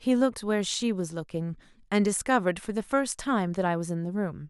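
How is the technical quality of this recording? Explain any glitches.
The technical quality of this recording holds up, with no glitches to explain.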